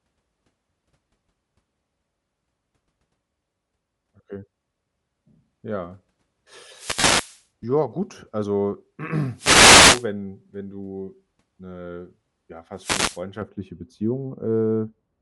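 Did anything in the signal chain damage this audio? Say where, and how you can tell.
Yes. At the codec stage, the whole speech track carries a breathy, grainy edge in the upper band, where detail sounds replaced by shaped noise rather than carried through. That plainly audible texture is likely Bluetooth LC3 compression. LE Audio's transform codec, at a rate that fits roughly 48 kbps with 10 ms frames, discards much of the high spectrum and fills the gaps with noise. Sibilants and breath come out hissy and coarse as a result.

In the analogue radio link, three wireless microphone noise hits appear as swishes of static: 6.63 to 7.46 s, 9.35 to 10.08 s (right after "gut also", ending before "wenn du 'ne ja"), and 12.76 to 13.22 s (just after "wenn du 'ne ja"). Each one is an FM fade, where reflected paths cancel the carrier and receiver noise rises up over the voice. The bursts last about half a second to 0.8 s.

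On the wireless transport, there is a gap of lost LE Audio frames from 7.00 to 7.04 s. It lasts 40 ms, which fits four 10 ms frames dropped. The LC3 decoder hides the hole by repeating the last spectrum with scrambled phase. So instead of silence you hear a brief noisy smear, buried inside the first noise hit.

In later processing, a de-emphasis filter was applied wrongly from 13.42 s to the end. It was likely used on audio with no pre-emphasis, or applied a second time. The treble slopes smoothly downward to about 11 dB below the 1 kHz level at 10 kHz. You can hear this as a change to a dull, muffled tone, with consonants losing their crispness for the last couple of seconds.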